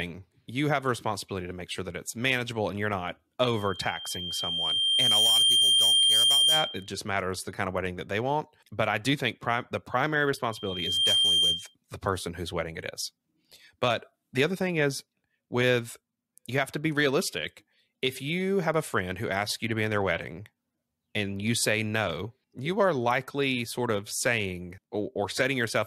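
From 3.45 to 6.90 s, a loudspeaker feedback squeal at 3.2 kHz swells over roughly two seconds until it stands about 10 dB above the speech, as the microphone picks up its own loudspeaker and the loop gain at that frequency goes past unity. It returns from 10.51 to 11.75 s, rising within about half a second to roughly 5 dB above. A spectrogram shows a thickening horizontal line at 3.2 kHz; the waveform's envelope swells during each event.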